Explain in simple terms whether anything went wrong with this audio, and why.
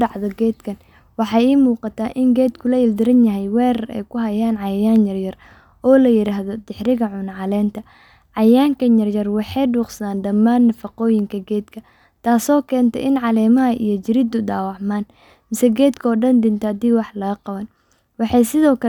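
Nothing went wrong with this recording of speech. No dropouts, glitches, distortion or other faults can be heard anywhere in it.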